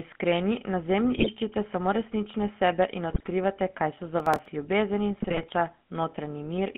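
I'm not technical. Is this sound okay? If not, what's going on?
No. Three kinds of fault are audible in this speech.

Throughout, the GSM full-rate codec of an old mobile phone gives the voice a buzzy, gravelly, narrow phone sound. The roughness is constant rather than arriving in bursts.

GSM bit errors, caused by a weak mobile signal corrupting the data, turn the voice into brief squawks and gargles at three points:
1.16 to 1.29 s, just after "iskreni na"
3.1 to 3.29 s, after "samo resnične sebe in" and before "kaj so"
5.18 to 5.53 s, after "ljubezen in"

From 4.2 to 4.46 s there is processor overload crackle. The device falls behind and keeps replaying tiny scraps of old audio, which produces a gritty tearing laid over the voice. Unlike the squawks, the voice itself isn't warped.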